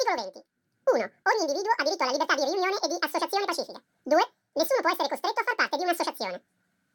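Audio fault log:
Throughout: audio read two samples at a time (double speed). Pairs of samples were taken as one frame, so the speech plays at 2x speed and 12 semitones higher. On a spectrogram, harmonics and formants are shifted upward and events are time-compressed. The waveform looks squeezed.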